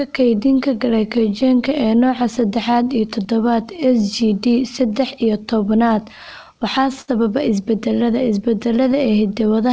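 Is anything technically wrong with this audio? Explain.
Yes. Throughout the speech there is clock drift between sender and receiver: the sender's clock runs roughly 5 percent slow, so the receiver keeps padding the stream rather than trimming it, unlike a fast-sender drift.

From 0.31 to 9.63 s, repeated timing corrections stretch the sound to 96 percent speed, adding around 0.4 s. They are heard as slight, unevenly spaced hiccups and a faintly dragging tempo, not as discrete dropouts.

Between 0.24 and 1.19 s, scattered short gaps appear, about three tiny holes totalling roughly 10 ms. Each is patched by continuing the last sound, leaving brief ticks rather than audible silences.

At 7.01 to 7.10 s, a short stall from a late packet makes the jitter buffer run empty. The last sound is held for 66 ms, then resumes with nothing lost. This single longer hold differs from the drift's many small edits.

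These faults sit on a G.722 call path at 64 kbps, which leaves nothing above 8 kHz.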